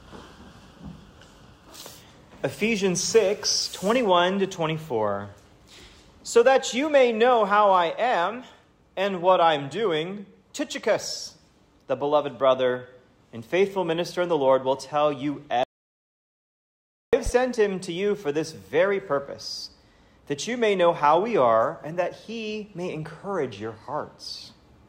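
At 15.63 s the sound cuts out abruptly into an audio dropout to silence that lasts until 17.13 s, so about 1.5 s of material is simply gone. The gap is silent, with no room tone or noise floor, and the sound resumes mid-flow. The likely cause is a lost input, such as a disconnected device or a failed link, while recording carried on writing zeros. On a waveform this is a dead-flat line; on a spectrogram, a fully black vertical band with hard edges on both sides.

Shortly after the return, from 17.26 s to 17.30 s, a single loud pop sits on top of the sound, which continues underneath it. It peaks a few dB above the surrounding signal, a sharp transient of about 40 ms. It is likely a voltage step or pulse from a plug, switch or driver glitch. The waveform shows a narrow spike standing out from the surrounding audio, and the spectrogram shows a thin bright vertical line spanning the full frequency range.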